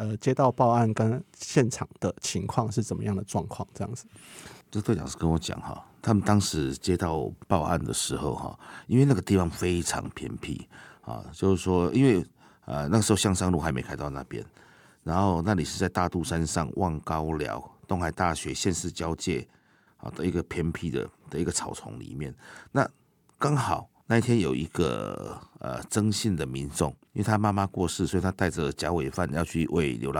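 Nothing technical stands out here: it's a speech recording, and there's no fault to point to anywhere along it.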